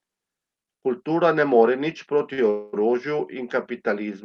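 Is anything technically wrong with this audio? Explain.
Yes, the speech has two playback interruptions close together, both from a call path that was otherwise carrying it through a speech codec band-limited to about 12 kHz.

From 2.33 to 2.40 s there is a short stall from a late packet. A packet arrived late, the jitter buffer emptied, and the receiver stretched the last sound for about 45 ms. It then resumed exactly where it stopped, so nothing is lost. What you hear is a syllable held slightly too long with a slight buzz or dip. Its brevity sets it apart from the next fault.

From 2.50 to 2.75 s comes a call audio freeze. This is likely caused by packets held up in transit, which drained the buffer for about 230 ms. The last sound is carried on as a fading buzz or hiss rather than dropping to silence, and the speech then continues without anything skipped. Unlike the stall, this is long enough to hear as a distinct hang inserted into the speech, adding a quarter-second delay.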